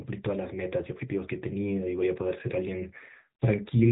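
From start to finish, the speech carries the sound of the AMR narrowband mobile codec. Nothing reaches above about 3.8 kHz, so the top of the sound is cut away and sibilants lose their edge. The damage is plainly audible. The codec rebuilds the voice from a vocal-tract model fed by a few pulses per short subframe. At a rate that fits about 8 kbps, that model sounds buzzy and synthetic.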